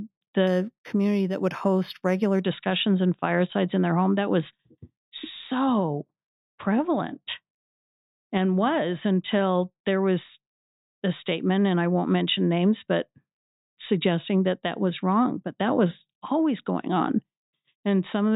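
From 0.47 to 2.43 s the speech shows imaging from linear upsampling. The rate was raised by straight-line interpolation, consistent with 8 kHz audio lifted to 44.1 kHz. Mirror images fill 4 to 8 kHz, roughly 30 dB down. Sibilants gain a faint metallic shimmer.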